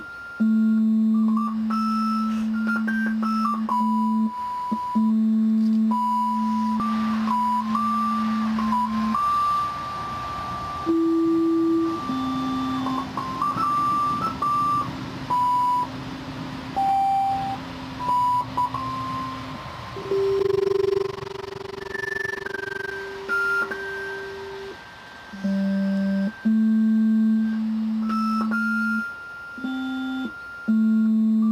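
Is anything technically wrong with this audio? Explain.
Yes. From 20.40 to 22.93 s there is overlap-add ripple: windowed frames were recombined with an overlap whose gains don't sum evenly, so the level dips by about 60 dB once per frame, around 20 times a second. It sounds like a harsh flutter, and its strictly regular rate sets it apart from irregular packet-loss dropouts.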